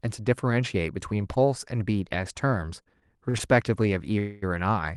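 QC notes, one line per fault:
2.83–3.42 s, repeated stalls (stutter): five short breaks interrupt the speech within about 0.6 s, each patched by stretching the preceding sound, the longest lasting 40 ms and 104 ms in total, roughly a fifth of that stretch. Packets kept arriving behind the playback rate, so the jitter buffer ran dry several times. The speech drags and catches rather than jumping ahead, and nothing is lost. A dropout would skip material, and a single freeze would be one long hold.
4.19–4.44 s, call audio freeze: the speech halts for 234 ms while the last sound carries on as a fading buzz that never reaches silence, then picks up exactly where it stopped. The likely cause is packets held up in transit long enough to empty the jitter buffer, with the receiver filling the wait. Unlike a stutter, this is one continuous hold, and everything after it plays about 0.23 s later than it otherwise would.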